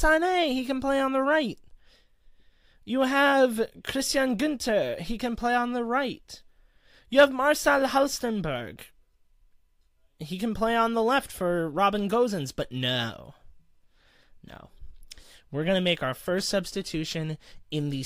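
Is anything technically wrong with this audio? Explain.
No, the signal shows no technical faults that a listener could detect.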